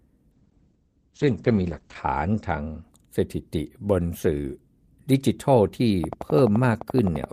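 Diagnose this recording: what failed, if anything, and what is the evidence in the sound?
A call bitrate drop at the codec stage cut the rate from 32 to 9 kbps between 0.33 and 2.89 s. The speech turns coarse and muffled as the bandwidth narrows from 20 kHz to 8 kHz.

A train of clicks from 6.04 s to the end ticks regularly at 11.7 per second, well above the speech. It likely comes from interference in the analogue wiring.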